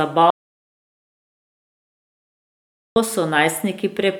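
The input to this speech recording was likely lost, through a disconnected device, failed link or stray mute, while silence kept being written: an audio dropout to silence from 0.30 s to 2.96 s. Speech cuts off abruptly, leaving about 2.66 s of dead silence with no room tone, and whatever was said then is gone.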